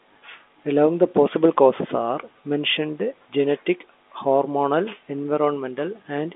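Speech, with no technical faults to report. It carries the narrow sound of G.711 telephone coding, with the band held to roughly 250 Hz to 3.6 kHz, as expected of a landline path.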